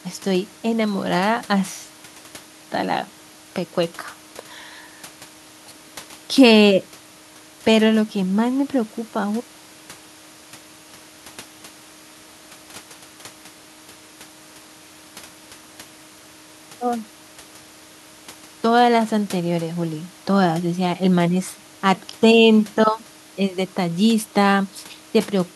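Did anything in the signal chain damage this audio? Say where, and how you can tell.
No, nothing in the signal chain damaged this audio, and no stage leaves any audible mark on it.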